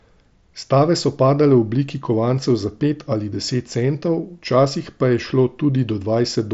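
Speech with no technical fault to report. It has been carried over the wideband Bluetooth mSBC headset codec, which is audible as nothing above about 7.7 kHz and a light graininess from the codec at around 61 kbps.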